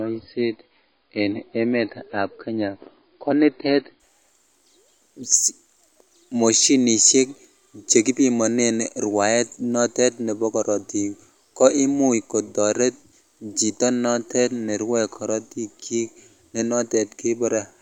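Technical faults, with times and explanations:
0.0–4.0 s, adaptive stream starting at a low bitrate. The speech is dull, with nothing above 5.1 kHz, and codec artefacts are strong, which fits a low-rate MP3 near 24 kbit/s. The player began low to start quickly. At 4.0 s quality jumps up without a gap.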